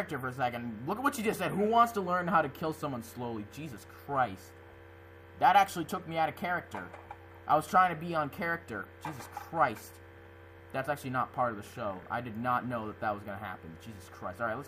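No technical faults are audible anywhere in this audio.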